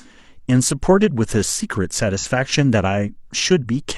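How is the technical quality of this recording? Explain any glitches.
One glitch stands out in the speech. From 2.18 to 2.25 s there is a brief smeared, noisy or phasey patch, covering about 43 ms of lost audio, where detail blurs instead of cutting out. This is AAC frame loss with concealment. The length fits a single lost coded frame. The decoder covered the hole by reusing the spectrum from the preceding good frame with scrambled signs or interpolated energy, which fills the gap without any true detail.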